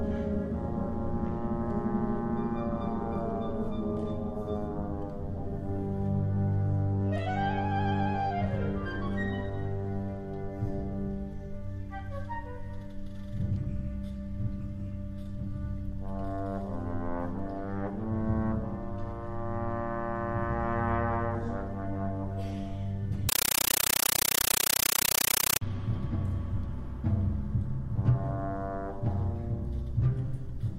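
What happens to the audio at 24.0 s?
At 24.0 s the audio is replaced by a compressed stream played as audio, running from 23.29 s to 25.61 s. An AC-3 (Dolby Digital) bitstream was passed through the digital link as if it were ordinary samples instead of being decoded. Each frame comes out as a 9.33 ms burst of noise followed by padding, repeating 31.25 times a second, so the sound is replaced by chattering static. The pattern fits a 448 kbps stream.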